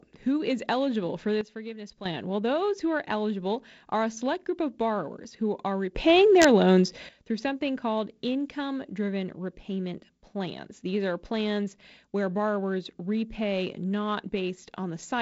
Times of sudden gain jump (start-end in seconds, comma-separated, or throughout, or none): 1.41-2.06, 5.95-7.09